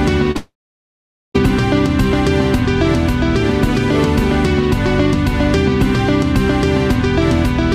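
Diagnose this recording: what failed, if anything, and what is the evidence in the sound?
Short concealed packet loss at the network stage, around 0.31 to 0.37 s: a brief smeared wobble where the decoder patched roughly 30 ms by extending the last sound.

Right after, from 0.37 to 1.36 s, the sound fades into about 0.84 s of silence before resuming further on, likely a long network dropout the concealment couldn't cover.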